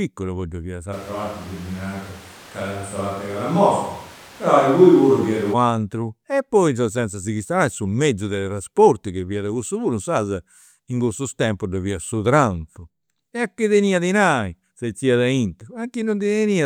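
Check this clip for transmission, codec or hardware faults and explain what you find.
One fault stands out, in the speech between 0.94 and 5.52 s. It is a switch to a distant microphone, heard just after "e poi ddoi fiat". The sound turns roomy and hollow at once and loses low end. The level barely changes, but room noise rises to roughly 25 dB below the speech. The cause is likely the close microphone dropping out and a far one, such as a camera's, taking over. The change back at 5.52 s is just as abrupt.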